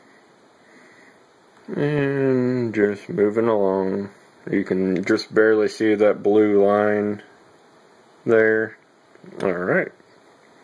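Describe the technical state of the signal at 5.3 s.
At 5.3 s the signal is intact, with no fault audible at that moment.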